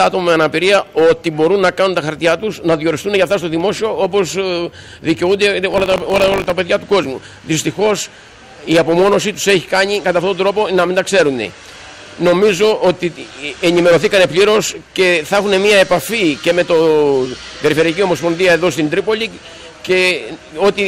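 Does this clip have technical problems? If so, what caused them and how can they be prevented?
Yes. Buffer tearing from 5.70 to 6.52 s gives a robotic 50 Hz rattle: a small slice of each period replays audio about 40 ms old, with hard joins. A spectrogram shows evenly spaced vertical streaks; the waveform shows steps every 20 ms. Keeping the writing program safely ahead of the hardware read position prevents it.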